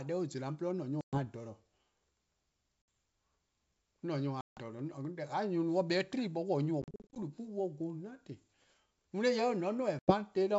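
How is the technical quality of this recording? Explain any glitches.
The recording has five dropouts from packet loss on an ADPCM call, over a wideband line that sounds like clean G.722. The dropouts fall at 1.01–1.22 s, 2.82–2.88 s, 4.41–4.61 s, 6.82–7.19 s (a scatter of short gaps, none longer than 40 ms) and 9.99–10.14 s. Each gap is a hard-edged hole of silence. Then the decoder's predictor and step size are briefly out of step with the sender's, so the speech comes back slightly distorted before it settles.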